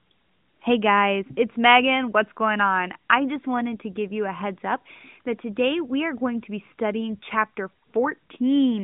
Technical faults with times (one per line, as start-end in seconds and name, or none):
none